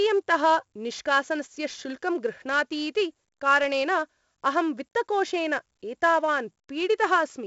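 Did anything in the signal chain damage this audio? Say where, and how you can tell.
Yes, at the codec stage. Throughout the speech there is a gritty hiss that rises and falls with the voice, sitting about 20 to 30 dB below it, and sharp onsets come out roughened. Nothing is heard above about 7.7 kHz, which points to a 16 kHz sample rate and a 64 kbps stream. That combination is heavy 4-bit ADPCM compression: each sample is coded as a coarse step from a prediction, and the adaptive step size lags behind sudden attacks.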